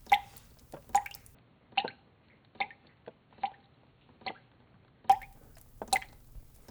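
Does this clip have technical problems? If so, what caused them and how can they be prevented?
Yes. From 1.35 to 5.09 s the sound turns dull, with nothing above 4.4 kHz and a new noise floor about 35 dB down, at unchanged level and with no gap, likely an input switched to a poorer device. A spectrogram shows the top band cut flat across that span. Locking the recording to one fixed input device prevents it.

From 5.92 to 6.18 s a burst of processor overload crackle tears through the sound. Many tiny buffers, around 1.5 ms each, missed their deadlines and were skipped, leaving hard-edged gaps. The waveform shows jagged discontinuities and the spectrogram shows broadband vertical streaks. Freeing CPU load or enlarging the buffer prevents it.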